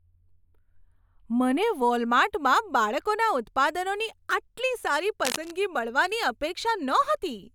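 From the start to 1.62 s, just before "વોલમાર્ટમાં બાળકોના ઉત્પાદનોની આટલી", the speech has a thin, phasey edge, with the top end dulled by a fixed notch around 7 kHz. This is channel delay, heard as comb filtering. One channel runs late by only a few samples, roughly 0.07 ms. When the two channels are summed to mono, the shared signal cancels at evenly spaced frequencies, and the first of those notches falls high in the spectrum.

From 5.25 to 5.51 s, right after "બાળકોના ઉત્પાદનોની આટલી સારી", a dense, uneven scratching rustle sits over the speech at about 5 dB below it. This is cable scratch noise. The likely cause is a worn cable, connector or control being moved, so that its contact resistance fluctuates rapidly and adds irregular bursts of noise.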